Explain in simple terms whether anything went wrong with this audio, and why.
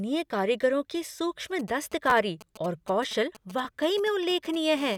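Three separate problems can be heard in this speech clip.

From 1.59 s to 4.56 s, faint short buzzes come and go in a galloping dit-dit-dit rhythm under the speech. These are GSM signalling bursts. A 2G mobile phone nearby was sending brief groups of radio pulses, as it does before a call or text arrives. The audio circuit picked up those pulses and turned them into sound, so each group comes through as a quick rasp at about 217 Hz.

Twice the sound stutters for a split second, with a tiny hard-edged catch. The first is from 2.10 s to 2.12 s and the second is at 3.65 s. This is a repeated buffer. The playback device ran out of fresh audio, so it replayed the last short chunk it had: twice more at the first spot and once more at the second. Each chunk lasts about 11 ms, which fits a 512-sample buffer. That is why it sounds more like a click or brief buzz than an obvious echo.

From 4.77 s to 4.96 s, a hard, steady, raspy buzz appears that has nothing to do with the speech. 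This is GSM phone buzz. Here the nearby phone was on an actual call, so it transmitted continuously at 217 pulses per second instead of in short groups. The audio circuit turned that radio signal into sound, producing a harsh drone at 217 Hz with many overtones.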